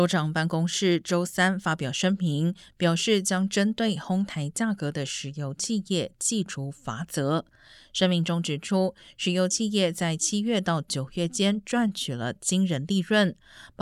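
Nothing in this speech recording stands out as a technical fault at any point.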